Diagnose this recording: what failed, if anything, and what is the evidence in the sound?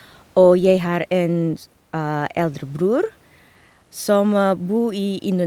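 Nothing in the chain has failed: the speech sits well above a steady bed of room noise about 37 dB down, which belongs to the acoustic space the microphone was in rather than to any stage of the recording or playback path.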